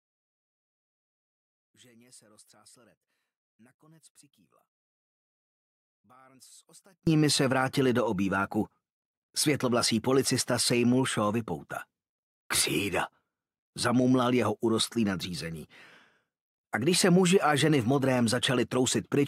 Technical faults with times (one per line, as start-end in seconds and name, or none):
0.00-7.07 one channel inverted